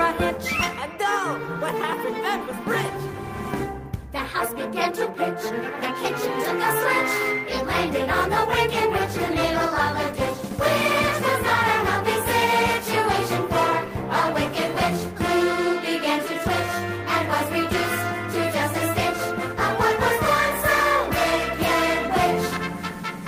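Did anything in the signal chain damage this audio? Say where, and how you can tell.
No, nothing in the signal chain audibly damaged this audio: there are no dropouts, level jumps or other disturbances at any stage from capture to playback.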